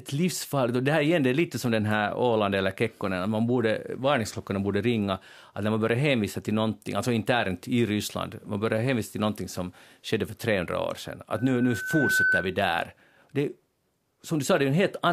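After "år sedan", from 11.35 to 12.55 s, loudspeaker feedback squeal: a 1.5 kHz tone swells over under a second to about 5 dB above the speech. On a spectrogram it appears as a thickening horizontal line.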